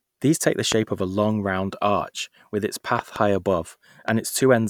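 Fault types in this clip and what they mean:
Loud pop: at 0.72 s, 2.99 to 3.18 s (two pops) and 4.09 s, sharp thumps about 15 dB over the speech, likely from a voltage spike.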